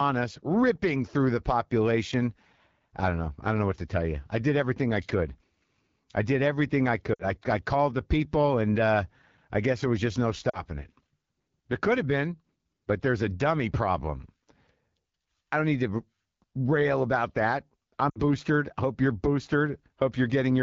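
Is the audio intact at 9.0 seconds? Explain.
No. At 9.0 seconds the speech carries AMR wideband (HD Voice) codec damage, as it does across the whole clip. The codec models the voice as a pulse-excited vocal tract below 6.4 kHz and substitutes shaped noise from 6.4 to 7 kHz. The plainly audible roughness and raspy texture at this point fit one of its lowest modes, around 8.85 kbit/s, where too few bits remain to reproduce the excitation cleanly.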